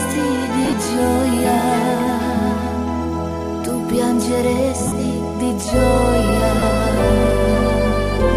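Lost LE Audio frames at 0.65 s, 4.87 s and 6.59 s left the LC3 decoder refilling gaps of 52.5 ms (scattered over 75 ms, runs of around 20 ms), 45 ms and 30 ms with recycled, sign-scrambled spectra. Each brief stretch turns into a noisy, grainy smear.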